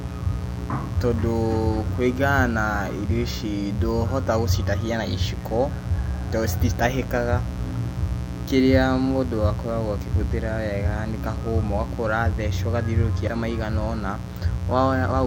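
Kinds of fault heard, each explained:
Mains buzz: A steady, raspy buzz runs under the speech for the whole clip, built on a 60 Hz mains fundamental with a dense stack of harmonics climbing well into the kilohertz range. Sharp switching spikes, of the kind a dimmer, rectifier or poorly shielded line produces, enter the signal path twice per mains cycle. The buzz sits only moderately below the speech, loud enough to stay clearly audible in the gaps and behind the talker.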